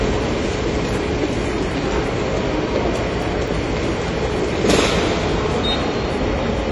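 From the start, the sound is dull and smeared with a watery, fizzy texture, likely from AAC compression at a low bitrate near 32 kbps. On a spectrogram nothing appears above 11.5 kHz, a flat ceiling with patchy holes in the upper bands.

Between 2.97 and 3.48 s come three CD scratch ticks, where a blemish defeated error correction on successive disc turns. Each is a sharp click under a millisecond long, visible on the waveform as a narrow spike or brief flattened gap.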